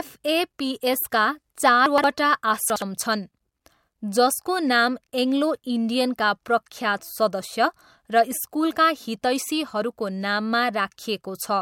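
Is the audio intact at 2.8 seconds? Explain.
No. From 2.70 to 2.82 s the speech has chunks out of order. One 60 ms chunk plays one chunk late, after the chunk that should follow it. Nothing is missing. The swap leaves three hard joins, heard as a brief jumbled moment.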